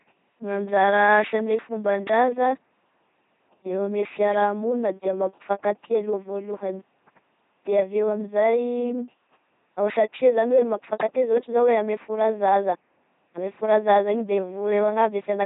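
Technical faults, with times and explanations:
Throughout, LPC-10 vocoder: the speech is a flat, buzzy robot voice because each frame is rebuilt by a small ten-pole filter fed either a pulse buzz or hiss, never a mix. Nothing remains above 3.8 kHz, and the heavy damage fits a 2.4 kbit/s rate.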